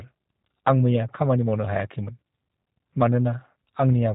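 Throughout, the speech sounds slightly rough and synthetic, with nothing above 4 kHz, which points to the G.729 codec at about 8 kbit/s. It rebuilds each 10 ms frame from a vocal tract filter, a pitch predictor and a few pulses, and the damage is plainly audible.

From 3.54 to 3.56 s, the sound smears briefly into a buzzy, fading tone, then stays weak for a moment after. This is VoIP packet loss concealed by the speech codec. About 20 ms went missing, which fits a single lost packet, and the decoder extended its last pitch and filter while lowering the gain.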